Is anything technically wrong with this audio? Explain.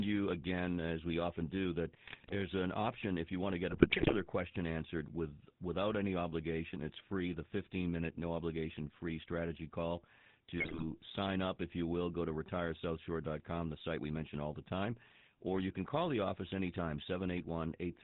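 Yes, two things. The whole clip has plainly audible GSM full-rate codec damage, consistent with the old 13 kbps phone codec. It models the vocal tract and drives it with sparse pulses, with nothing above 4 kHz, so the speech comes out dull, buzzy and gravelly.

On top of that there are GSM bit errors at 2.06–2.46 s, 3.70–4.13 s and 10.58–10.98 s. Corrupted bits scramble the decoder's filter, pitch and gain values frame by frame, so each burst breaks into squawks, pops and gargling for around 0.4 s.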